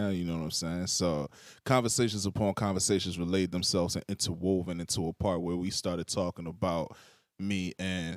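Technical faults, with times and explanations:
No technical faults can be heard anywhere in the speech recording, and the signal holds steady from the first moment to the last.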